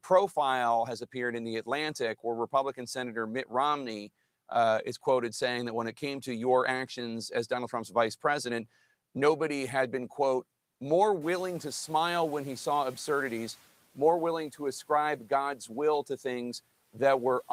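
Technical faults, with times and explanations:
11.21–13.63 s, noise suppressor catching up: room noise jumps by about 17 dB around 11 s and at first passes through only lightly reduced, then sinks by about 8 dB over 2.42 s as the suppressor's noise estimate adapts. Unlike pumping, it settles once and stays down.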